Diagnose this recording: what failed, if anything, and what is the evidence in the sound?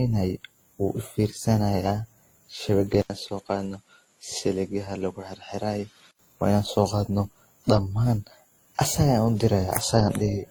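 Throughout the speech, two sets of compression artefacts sit on top of each other: the artefacts of one codec layered with those of another, with the band stopping near 20.2 kHz. This is at the codec stage, likely transcoding between lossy codecs, consistent with WMA at 48 kbit/s re-encoded to Opus at 24 kbit/s.

From 3.02 s to 6.19 s the speech turns duller and about 5 dB quieter, loses everything above 11.4 kHz, and gains a faint new noise floor well below it, with an 80 ms gap at the switch. At the input stage, the likely cause is an input switched to a poorer device before the original input returns.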